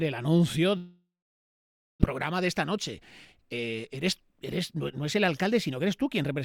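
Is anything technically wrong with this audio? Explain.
Yes, there are two kinds of fault.

From 0.77 to 2.04 s there is a long network dropout. The last sound is stretched into a fading buzz, then about 0.92 s of silence follows. This was likely caused by packets never arriving, so roughly 1 s of audio is simply gone. The decaying buzz before the silence distinguishes it from a clean mute.

Jitter buffer speed-up follows as the receiver sheds a backlog of about a fifth of a second. From 2.13 to 3.33 s the audio runs 108% fast, and from 3.97 to 6.30 s it runs 105% fast, each stretch trimming roughly a tenth of a second as tiny pitch-period slices. Pitch stays unchanged, which rules out a resampling error.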